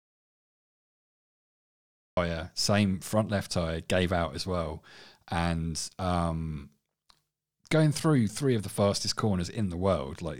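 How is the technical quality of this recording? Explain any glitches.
The recording has one clear problem at the very start: an audio dropout to silence. From the start until 2.17 s it's dead silence with no room tone, likely because the input was lost while the recorder kept writing silence. Speech then cuts in abruptly at "same front left tyre".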